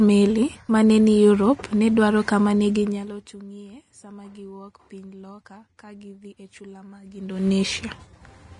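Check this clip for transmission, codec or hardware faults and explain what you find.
Two things stand out: a codec problem running the whole way through, and a short burst of zipper noise near the end.

The codec damage is there from start to finish and is plainly audible. The speech has a hissy, grainy top end, consonant attacks are smeared, and nothing comes through above about 10.6 kHz. That's most likely Vorbis compression at a low setting, roughly what you'd expect around 33 kbps. Vorbis keeps a smooth spectral floor but quantises the detail riding on it very coarsely at that rate, so the fine high-frequency texture is swapped for noise of about the same energy. It also drops everything above its cut-off, and that's the dull-yet-fizzy quality you hear.

From 7.06 to 7.48 s there's zipper noise: a fast ticking, almost a buzz, sitting on the sound while the level changes by something like 20 dB. 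The gain change is being applied in coarse steps, about 100 a second, with no smoothing between them. Every jump puts a tiny click into the waveform, and at that rate the clicks run together into a zip.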